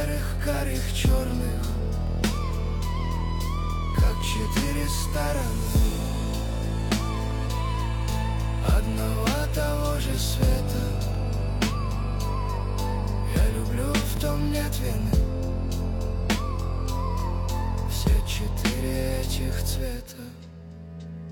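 At 2.07, 5.10, 8.12, 11.15, 14.17, 17.20 and 20.22 s there are overlapping chunks. Each 3 s chunk begins 25 ms before the previous one ended. That 25 ms slice plays twice at every join, producing a brief stutter at a steady three-second spacing.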